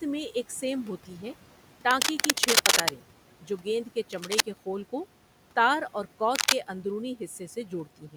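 Right after "ایک سیم ہوتی ہے", from 1.91 to 2.90 s, you get a rough scratching burst that sits a bit louder than the speech itself. It's cable scratch noise, most likely a worn lead or connector being moved so its contact resistance jumps around and throws dense, ragged noise into the signal. It comes back more briefly from 4.12 to 4.42 s at roughly the speech level, and again after "خول کو تار اور" from 6.35 to 6.55 s, louder than the speech once more.

Between those, from 3.42 to 3.66 s, just before "گیند کے", the speech is cut by the noise suppressor. It mistook part of the speech for background and pulled it down along with the room noise, which sits about 23 dB under the speech. The dip reaches about 9 dB, and only around a tenth of a second sounds swallowed. The same thing happens at the very end, from 7.86 to 8.16 s, where the dip reaches about 10 dB and the tail fades out faint.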